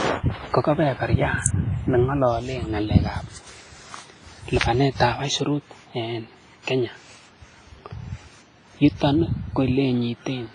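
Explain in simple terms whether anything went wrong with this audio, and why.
Two things went wrong. Throughout the speech there is heavy damage from lossy compression, most likely WMA compression. The sound is smeared and ringing, with a washy hiss that swells and fades along with the voice, and nothing survives above about 10.5 kHz, so the top end sounds dull. Unlike simple background noise, this hiss is tied to the speech itself, because the encoder's errors spread over tens of milliseconds around each sound.

There are also two sharp snaps, at 1.46 s and at 4.61 s, lasting about 3 and 16 thousandths of a second. These are most likely electrical switching spikes, where a nearby switch, motor or static discharge sparked and the audio line picked it up. What sets them apart from the compression damage is that they are brief, isolated events sitting on top of the sound, rather than a smearing of the sound itself.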